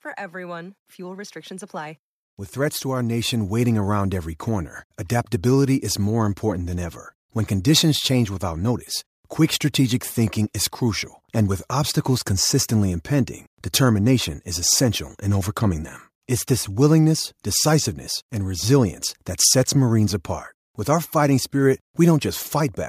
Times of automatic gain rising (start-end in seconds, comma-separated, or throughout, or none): 0.31-8.71